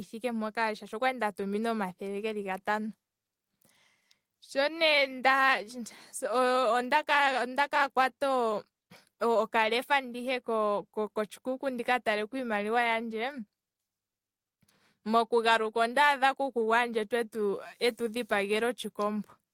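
A speech recording carries clock drift between sender and receiver, with the sender's clock running roughly 3 percent slow throughout. The receiver makes repeated timing corrections from 0.26 s to 19.46 s, playing at 97 percent speed and stretching the audio by about half a second overall. These corrections repeat short pieces to keep up with the slow sender's starving buffer, so the result is slight, unevenly spaced hiccups and an unsteady pace. Unlike a plain resampling error, pitch stays unchanged. Unlike packet-loss gaps, nothing goes missing and the edits all lengthen.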